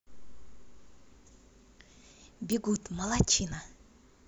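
A speech recording carrying a single electrical switching spike at 2.52 s: a sharp, very brief snap laid over the voice, lasting under 10 ms and peaking at about -15 dBFS. Its shape, a hard transient, points to a likely cause in a nearby switch, relay or motor contact arcing, with the resulting burst of interference coupling into the audio line rather than being picked up acoustically.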